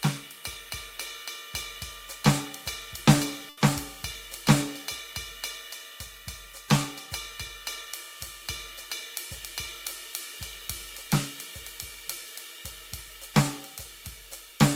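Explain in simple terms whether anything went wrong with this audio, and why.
Something did go wrong, at about 3.49 to 3.59 s: a burst of packet loss. A short run of audio packets never arrived in time to be played. To cover the gap, the receiver kept extending the last bit of music it had for about 80 ms, fading it down as it went. When the real audio returned, the music jumped ahead, and roughly 80 ms of it was simply gone.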